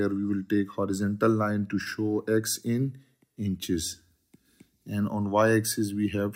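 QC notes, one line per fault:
0.00 to 1.86 s, block size mismatch (truncated): a steady buzz at about 46.9 Hz sits under the sound. The end of each block is dropped, and the buzz rate fits 1024-sample blocks. Timing and pitch stay unchanged, at 1.0x speed.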